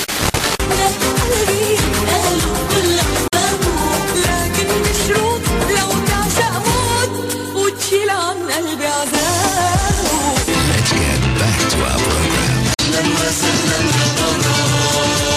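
At 3.28 s the sound cuts out for about 46 ms, then returns at 3.33 s, and the same thing happens again from 12.74 to 12.79 s. Both gaps start and end abruptly or with a fade of a few milliseconds, and the audio picks up further along, as though it kept playing through the hole. That pattern is likely a Bluetooth dropout: packets didn't reach the headphones in time, so the output went silent until good ones arrived. Each gap's length fits about two lost packets.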